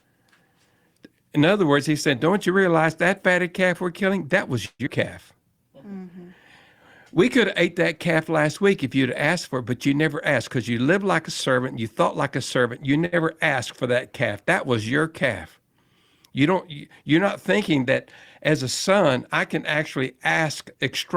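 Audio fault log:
4.65–4.88 s, long network dropout: The speech gives way to about 209 ms of synthetic fill, a buzzy continuation of the last sound that decays, then roughly 50 ms of near-silence before the signal resumes. About 100 ms of speech never arrives, and the playout delay shifts by around 50 ms, which points to a likely burst of lost packets. On a spectrogram the harmonics smear into a fading, blurred band, then a dark gap. The waveform shows a shrinking envelope flattening out before speech returns abruptly.
5.35–6.00 s, jitter buffer slow-down: The receiver repeats single pitch periods and slivers of pauses to rebuild its reserve, inserting 91 ms in total. The speech plays at 87% speed with unchanged pitch, so sounds are drawn out. On a spectrogram the harmonic lines stay at the same heights but stretch horizontally. The waveform shows near-identical cycles repeated back to back, lengthening vowels and gaps.
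11.77–12.87 s and 19.97–20.75 s, jitter buffer speed-up: With excess audio queued, the receiver trims pitch-period-sized pieces to reduce delay, removing about 50 ms in each span. Playback runs at 105% and 106% respectively, with pitch unchanged, so the speech sounds slightly hurried. On a spectrogram the harmonics keep their frequencies but syllables compress in time and transitions crowd together. The waveform shows shortened vowels, with periodic cycles spliced out at small, regular intervals.
13.06–13.14 s, short stall from a late packet: A packet arrives late, the buffer empties, and the receiver stretches the current sound by 69 ms until the packet lands, then continues from the same point with nothing lost. Total delay grows by 69 ms. The sound is held unnaturally long. On a spectrogram a steady, slightly blurred harmonic patch extends in time. The waveform shows a short run of repeated cycles, possibly with a small amplitude dip.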